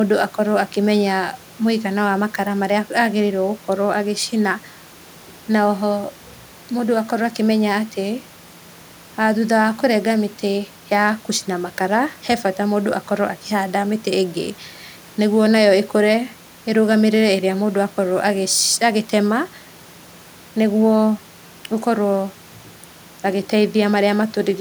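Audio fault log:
Nothing went wrong anywhere in this speech recording, and the only thing under the talking is the room's own background noise, sitting about 28 dB below the speech.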